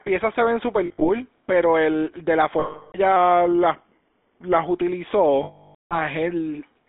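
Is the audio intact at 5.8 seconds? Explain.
No. Lost GSM frames cover 5.43 to 5.99 s, about 480 ms, which fits roughly 24 lost frames. Each missing frame reuses the last good frame's settings, so the sound holds as a rough, metallic ring. Past about a third of a second it is muted, so by 5.8 s the audio is silent.

The GSM full-rate codec also affects this moment, as it does the whole clip. It models the vocal tract and drives it with sparse, regular pulses. The band runs from about 250 Hz to 3.6 kHz, and the buzzy, gravelly roughness is plainly audible.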